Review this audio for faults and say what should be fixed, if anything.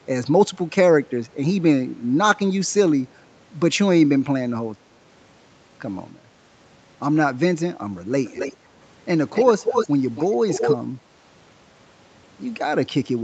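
A delayed copy of the speech returns in four bursts, at 8.25–8.56 s, 9.34–9.88 s, 10.15–10.27 s and 10.48–10.76 s, each trailing the original by about 272 ms. This is an echo leak, likely from a far end playing the call on a loudspeaker whose echo canceller let its microphone pickup through. The copy sits roughly 10 dB down in the first burst, about 15 dB down in the third, and close to the speech level in the second and fourth. It is carried within the call's roughly 8 kHz bandwidth. Fix it by improving echo cancellation or using a headset on the far end.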